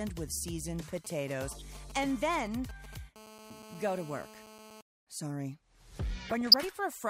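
From 0.96 to 2.95 s a nearby 2G handset is only signalling, sending brief clusters of radio bursts rather than a continuous transmission, and the audio circuitry rectifies them. These are GSM signalling bursts, heard as a galloping dit-dit-dit of short buzzes at a 217 Hz repetition rate, sitting roughly 15 dB below the programme and arriving in irregular groups rather than as a steady tone.

Overlapping that, from 1.48 to 1.62 s, weak DAB reception lets bit errors slip past the error correction into the MP2 audio data, at a rate of a few tenths of a percent. Corrupted samples put short blips of noise into single sub-bands, and corrupted scale factors make sub-bands jump in level for up to a frame. This DAB burbling lasts long enough to suggest about six frames were hit, and it comes through as a short patch of burbling laid over the sound.

From 3.16 to 4.81 s the phone is in a call and transmits continuously in bursts 217 times a second. 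Rectified in the audio path, these produce GSM phone buzz, a hard, raspy 217 Hz drone rich in harmonics, unrelated to the programme, at about 16 dB below the signal.

From 6.27 to 6.56 s DAB burbling returns with a slightly higher error rate, around a third of a percent. It is about twice as long as the first episode, pointing to roughly a dozen damaged frames. The burbling is correspondingly more sustained.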